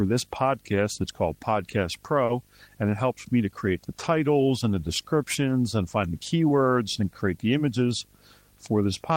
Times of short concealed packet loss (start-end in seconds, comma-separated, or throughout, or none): 2.25-2.31